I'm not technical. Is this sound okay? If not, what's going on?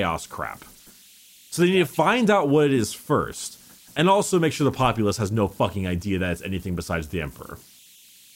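No. Throughout the clip there is a faint, high whistle, around 3 kHz, sitting in the pauses, and a grainy hiss under the quieter parts of the speech. These are converter idle tones. The converter that turned the sound into digital form was not adding the small random noise that keeps it steady. When the signal went quiet, its output settled into a repeating pattern, and that repetition is what you hear as a thin, steady tone.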